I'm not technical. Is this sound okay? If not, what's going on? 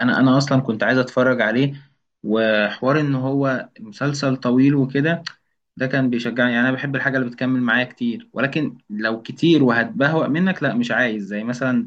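No. From 1.56 to 3.56 seconds the speech suddenly turns dull and watery, losing its crisp top end above 6.9 kHz, then snaps back with no gap. This is an adaptive stream at a lower bitrate: the connection slowed, so a lower-quality version played briefly.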